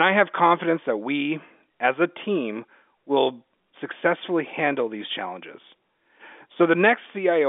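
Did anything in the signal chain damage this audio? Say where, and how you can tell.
No, nothing in the chain damaged this speech.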